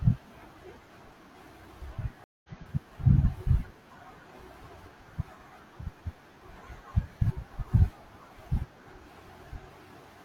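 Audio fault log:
2.24–2.49 s: stream reconnect. The speech stops dead for 200 ms. It resumes about 150 ms further on, so a short stretch is lost. The connection dropped, and the player reconnected and restarted its decoder mid-stream, rejoining the feed later.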